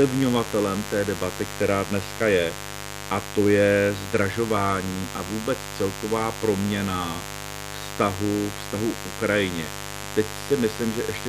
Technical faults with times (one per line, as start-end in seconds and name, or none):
0.00-11.28 mains buzz